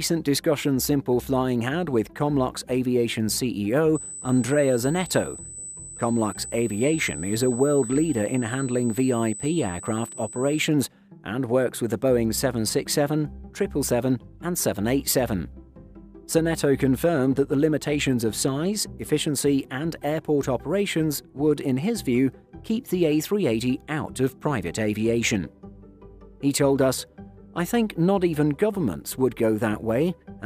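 From 3.95 to 10.58 s a thin, steady, high-pitched whine sits over the sound at a fixed 8 kHz, roughly 15 dB below the programme level, then stops. This is USB whine: the bus pulls current in regular 125-microsecond microframes, and that pulsing leaks into the audio through shared power or ground, producing a tone at the microframe rate of 8 kHz.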